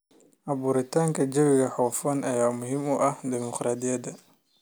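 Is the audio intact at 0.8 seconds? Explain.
Yes, the speech at 0.8 seconds is intact, with no dropout, click, distortion or other fault to be heard at that moment.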